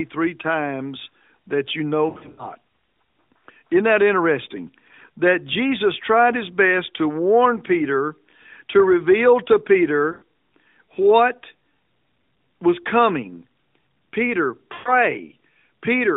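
Speech with three short dropouts where the sound briefly smears, stretches and sags in level: from 2.1 to 2.5 s just after "times that you know", from 10.12 to 10.23 s after "to reveal to", and from 14.74 to 14.9 s. These are lost AMR speech frames. The decoder fills each gap by repeating the last good pitch and vocal-tract settings at falling gain. The first event is broken up into several short gaps over roughly 0.3 s rather than one long silence, all within the narrow 250 Hz to 3.7 kHz band of the AMR narrowband mobile codec.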